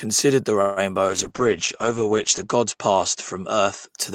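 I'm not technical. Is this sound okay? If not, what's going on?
No. There are two problems. The first is a call audio freeze from 0.61 to 0.80 s. For about 0.15 s the speech stops moving forward and the last bit of sound is stretched into a short fading buzz. The likely cause is that parts of the call were held up on the way, so the receiving end ran out of audio and filled the wait. When the audio resumes it picks up exactly where it stopped. Nothing is lost, but everything afterwards arrives slightly later.

The second is a call bitrate drop from 1.09 to 3.95 s. The connection signalled that it could carry much less data, so the speech was squeezed into a far smaller stream. The voice turns rough and muffled because crisp sounds above about 8 kHz are cut away. At its worst this lasts about 1.4 s. The clarity returns near the end of the clip.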